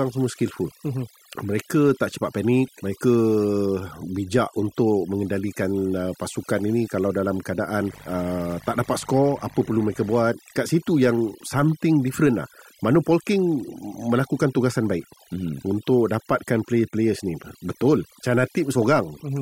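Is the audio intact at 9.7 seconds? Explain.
No. From 7.78 to 10.34 s, between "pasukan ini kalau dalam" and "kat situ", a dimmer, rectifier or unshielded path injects switching spikes twice per 50 Hz cycle, producing a steady, raspy mains buzz well below the speech level. Throughout the clip, overdone noise removal pulls frequency bands near its noise estimate far down, so quiet parts of the speech go with them over a near-silent, twinkling background.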